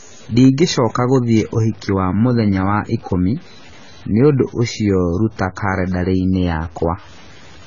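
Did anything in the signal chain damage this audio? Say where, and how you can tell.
Yes. At the sample-format conversion stage, the speech was likely truncated to very few bits without dither, which fits a 7-bit word. Throughout the clip, quiet passages turn gritty, with grainy distortion about 30 dB below the signal that tracks the speech, and the softest moments sputter.

The codec stage adds AAC compression damage across the whole clip: nothing comes through above 7 kHz, so the speech sounds dull and smeared, while sibilants warble and fizz. The heavy artefacts likely come from AAC-LC at a low rate, fitting about 16 kbps.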